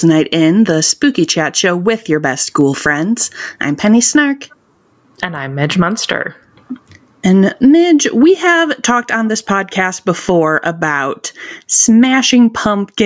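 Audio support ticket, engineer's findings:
Gain pumping, throughout: gain swinging around 20 dB, loud and soft parts pulled closer in level, sound squashed. Likely cause is input gain set far too high, with a fast limiter clamping every peak.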